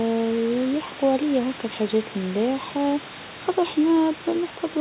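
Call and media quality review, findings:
Speech limited to about 4 kHz, consistent with a narrowband call codec such as G.711, with room noise sitting about 19 dB below the speech and no faults found.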